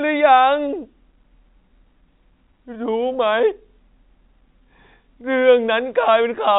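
There are no technical faults to describe in this speech, which comes through as ordinary G.711 telephone coding with nothing above about 3.9 kHz.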